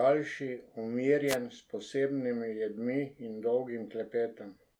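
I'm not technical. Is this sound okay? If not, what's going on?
No. At about 1.27 s a brief swish of static, like a burst of hiss, cuts across the speech and is gone by 1.37 s, roughly a tenth of a second later. This is a wireless microphone noise hit. The microphone sends the voice to its receiver by radio, and for a moment the signal faded as reflected copies of it cancelled each other out. The receiver's own background noise briefly rose up.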